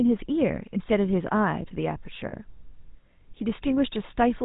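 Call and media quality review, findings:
GSM full-rate codec throughout: buzzy, gravelly roughness on the speech, nothing above 4 kHz, consistent with 13 kbps full-rate coding using pulse-spaced excitation in a vocal-tract model.

Lost GSM frames at 2.28–2.33 s: brief rough, metallic ring, about 50 ms. Decoder repeated the last good frame's parameters, which fits two lost 20 ms frames.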